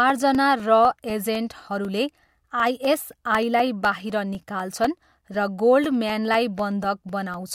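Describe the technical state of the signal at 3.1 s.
At 3.1 s the speech sits inside a run of periodic USB or driver dropouts lasting from 0.10 to 7.34 s. Every 0.25 s, a blocked bus or driver replaces roughly 2 ms of audio with silence, heard as regular ticks. On the waveform these are evenly spaced flat gaps, and the spectrogram shows thin vertical broadband lines.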